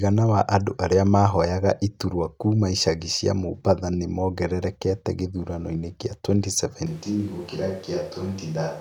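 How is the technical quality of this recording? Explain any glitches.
One fault affects the recording. From 6.87 s to the end, a switch to a distant microphone, likely from the close one failing, turns the speech suddenly hollow and roomy with more background noise, not merely quieter.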